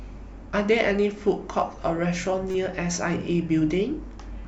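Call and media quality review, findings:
Corrupt frame decoded, 2.51 to 2.55 s. Short glitch cutting into the speech for about 36 ms, peaking near -25 dBFS. Probable component: speech decoder. Damaged bits in a couple of consecutive compressed frames were decoded anyway. Misread gains and codes put energy at the wrong frequencies for the length of those frames.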